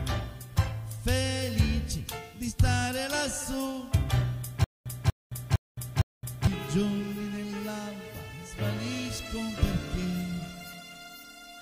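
A stalled player or stream is the likely cause of the stutter with silent gaps from 4.64 to 6.47 s: the same 241 ms fragment replays four times, each followed by about 217 ms of digital silence, repeating every 458 ms, while the intended audio is lost.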